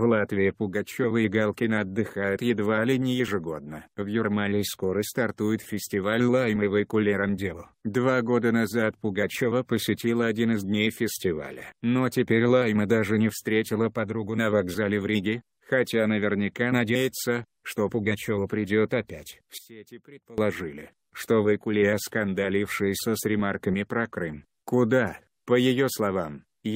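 From 19.58 to 20.38 s the sound drops by about 20 dB and then returns at full level. The likely cause is one channel inverted: one side of a stereo source had its polarity flipped, so whatever the two sides shared cancelled when they were summed to mono, and only their small difference remains. Unlike a dropout, which would leave silence, or a plain gain dip, which would keep the sound intact but quieter, this leaves a residue.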